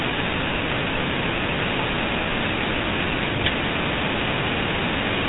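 From start to finish the speech carries the GSM full-rate codec: nothing above 3.8 kHz, plus a plainly audible buzzy, gravelly roughness from rebuilding sound with coarse regular pulses, consistent with about 13 kbps. Plain low-pass filtering would only dull it, without this grit.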